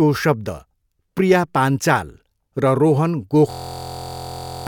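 A speech clip where, after "प्रिया पान्चाल र रोहन", a system hang loop runs from 3.51 to 4.67 s: a 23.2 ms slice, which fits a 1024-sample buffer, repeats exactly, giving a steady 43.1 Hz buzz. Unlike a dropout, about a second of audio is replaced rather than silenced.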